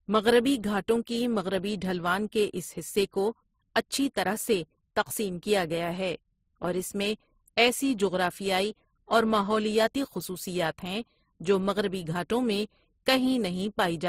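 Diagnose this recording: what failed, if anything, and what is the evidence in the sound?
The codec stage failed: the speech has been through transcoding between lossy codecs, and this runs for the whole clip. Two kinds of coding damage sit together: the artefacts of each codec are heard at once, and the band is cut, with nothing above 15.8 kHz. A single codec would leave one consistent artefact signature. This layering most likely comes from an MP3 encode near 44 kbit/s that was then re-encoded to Opus around 32 kbit/s, with Opus spending bits on the MP3 artefacts.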